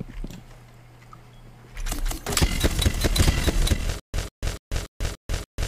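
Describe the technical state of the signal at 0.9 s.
At 0.9 s the signal is intact, with no technical fault present at that point.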